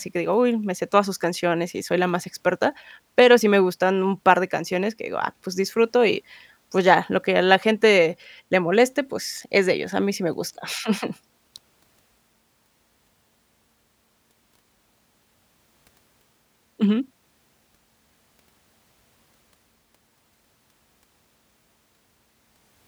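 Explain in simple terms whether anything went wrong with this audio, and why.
Nothing went wrong with this speech recording that could be heard on listening.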